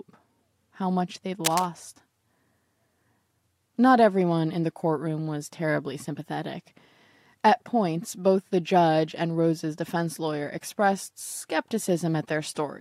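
At 1.45 s the speech picks up a burst of cable scratch noise lasting until 1.69 s, roughly a quarter of a second. It is a dense, ragged crackle sitting only a few decibels below the speech, loud enough to rasp audibly across it. The likely cause is a worn cable or connector being moved, so that its contact resistance fluctuates rapidly and injects irregular noise bursts into the signal path.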